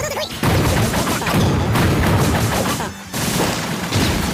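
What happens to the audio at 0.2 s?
At 0.2 s the audio has a wrong sample rate, and this lasts throughout the clip. The samples play back twice as fast as intended, with no conversion. Everything runs at double speed and sits a full octave, 12 semitones, higher. This fits audio recorded at 24 kHz being played at 48 kHz.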